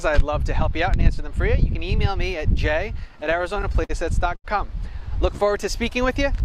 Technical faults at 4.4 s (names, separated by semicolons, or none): short stall from a late packet